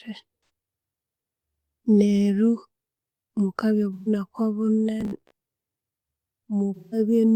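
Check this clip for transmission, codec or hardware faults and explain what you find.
Two kinds of fault are audible in the speech: AAC frame loss with concealment in three places, and a robotic buzz.

AAC frame loss with concealment occurs at 0.36–0.49 s, 3.93–4.08 s and 6.75–6.99 s. Missing frames, roughly 128 ms, 128 ms and 171 ms, are patched from the previous spectrum, giving smeared, noisy patches that show as blurred, structureless spectrogram blocks.

Robotic sound occurs at 5.01–5.31 s. A fixed 66.7 Hz metallic buzz, likely from a roughly 15 ms buffer repeating, shows as evenly spaced harmonic lines and a periodic waveform.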